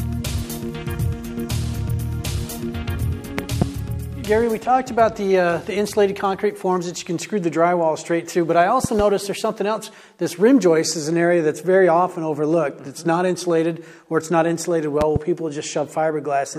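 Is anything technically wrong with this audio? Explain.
Yes. Loud pops occur at 3.39 to 3.64 s, 8.84 to 9.02 s and 15.01 to 15.18 s. Each is a double pop, peaking roughly 15 to 20 dB above the sound. A likely voltage spike, perhaps a switch or static discharge, is added to the signal.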